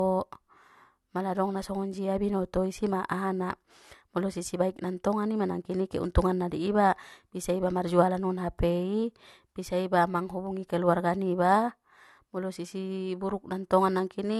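Throughout the speech, the spectrum stops dead at 12.4 kHz. The MP3 bitrate is ample, so that ceiling points elsewhere: this is likely low-bitrate audio saved at a high bitrate, with an earlier encode near 48 kbit/s AAC having removed detail the re-encode cannot restore.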